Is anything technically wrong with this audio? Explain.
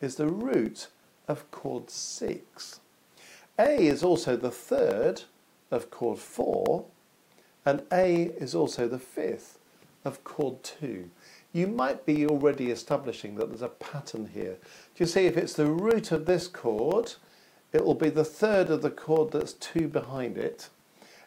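Yes. From 0.16 s to 21.17 s the audio carries periodic USB or driver dropouts. Every 0.125 s, eight times a second, a background task stalls the USB bus or audio driver, and about a millisecond of signal is lost and replaced with silence. Each gap produces a tick or pop, heard only while sound is present, forming a steady rhythmic clicking. A waveform shows tiny evenly spaced notches of near silence, and a spectrogram shows thin vertical broadband lines at a regular spacing.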